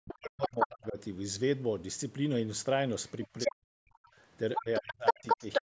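From 0.00 to 0.98 s, speech is suppressed in double talk. The talker sinks by roughly 40 dB, likely because the echo canceller ducked everything while both sides spoke. The waveform collapses and the spectrogram harmonics fade. The dip recurs at 3.46–4.10 s and 4.57–5.67 s, reaching about 35 dB in the final stretch.

Meanwhile, at 0.41–0.67 s, 3.08–3.52 s and 4.54–5.62 s, the other side's voice leaks through, likely as loudspeaker echo left behind. It is about as loud as the talker, and slightly louder at the end, appearing as a second, competing harmonic stack.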